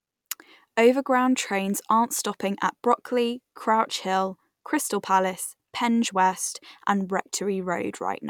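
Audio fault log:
No fault is heard in this speech clip.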